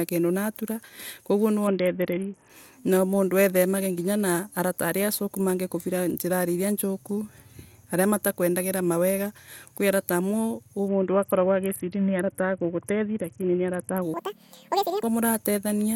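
From 1.67 to 2.49 s, just before "na mundu ethemage na", and again from 10.88 to 14.02 s, a Bluetooth SBC bit pool drop dulls the treble and adds gritty noise. The dullness fits a link squeezed from a bit pool near 31 down to about 6, around 55 kbps, starving the upper sub-bands. A spectrogram shows the high bands going blank while speckled quantisation noise fills the rest.

From 14.14 to 15.03 s, a section at the wrong speed plays 1.9 times too fast, hurried and pitched nearly an octave higher. The likely cause is playback against the wrong clock. On a spectrogram the harmonics jump upward and spread wider apart, and the waveform's cycles bunch together.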